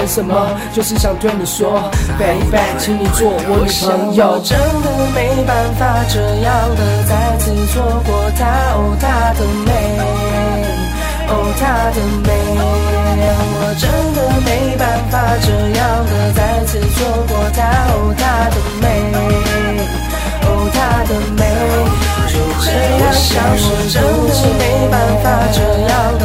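From 15.64 to 18.97 s, a jitter buffer speed-up runs the audio about 5% fast. The receiver trimmed short pitch-period slices, around 150 ms in total, to drain a backlog. Unlike a playback-rate error, the pitch stays put. Only the pace hurries.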